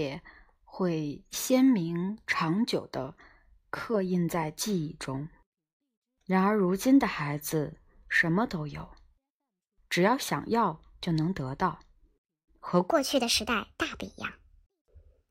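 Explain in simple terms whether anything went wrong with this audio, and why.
Wrong sample rate, from 12.9 s to the end at 15.3 s: the speech suddenly turns high and hurried because the samples are played back too fast, about 1.38 times normal speed, which fits 32 kHz audio played at 44.1 kHz. The pitch rises by about 5.5 semitones.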